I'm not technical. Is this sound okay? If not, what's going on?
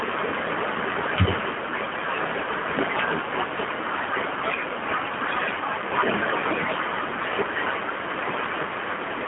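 No. The speech passed through the G.729 codec, a phone-call compression scheme that sends only a rough description of the voice and rebuilds it at the other end, here in its lighter G.729A form. The result is plainly audible for the whole clip: everything below about 150 Hz and above about 3.5 kHz is gone, so it sounds thin and muffled like a phone line, and the rebuilt voice has a rough, slightly artificial edge.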